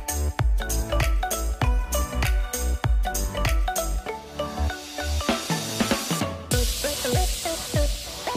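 Sample clock jitter runs throughout: the converter clock wanders by around 7 microseconds, so steep waveform slopes are sampled early or late, leaving error roughly 20 dB below the signal. It's a gritty hiss on loud, bright passages, absent in silence. A spectrogram shows broadband haze tracking signal energy.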